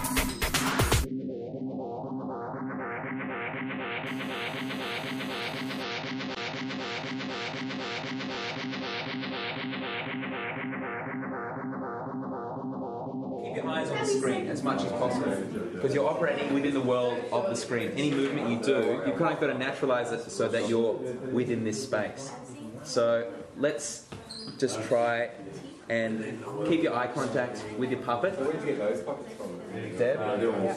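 From 4.07 to 5.83 s a hard, raspy GSM phone buzz sits about 18 dB below the sound, repeating at 217 Hz with a dense harmonic stack. A nearby 2G handset on a call is pulsing, and the audio circuitry rectifies those bursts. That rate, not 50 or 60 Hz, separates it from mains hum.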